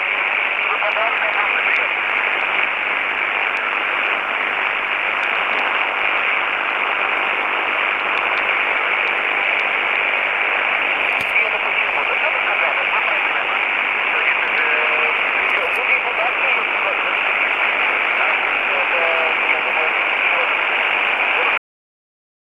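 At 21.58 s the recording ends with a cut-off end: the final stretch of audio was never written out or played back, so the last buffers are simply missing. The sound stops abruptly in the middle of whatever was happening rather than fading or decaying naturally. From that point the output falls straight to digital silence, which holds for about the last second of the file, with no tail or reverberation.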